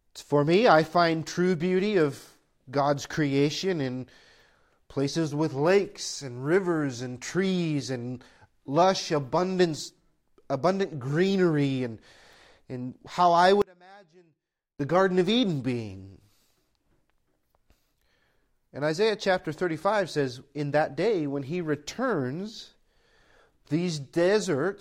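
Something in the signal chain likely lost the wanted feed for a moment while everything downstream stayed live, causing an audio dropout to a faint residue from 13.62 to 14.80 s. The speech cuts out abruptly mid-flow for about 1.18 s, leaving only faint sound, roughly 30 dB below its normal level, before snapping back just as suddenly. The hard edges at both ends set it apart from a natural pause or fade.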